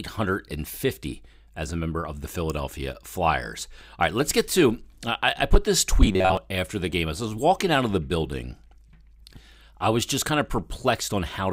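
From 6.05 to 6.37 s, between "I I put this" and "after the game", the speech collapses into a rigid metallic buzz at about 93.8 Hz that still loosely follows the words. This is robotic sound from repeated short buffers: audio likely stopped arriving in time, so playback looped a fragment of roughly 10.7 ms, matching one period of the buzz, over most of that 0.32 s stretch while the real audio went missing.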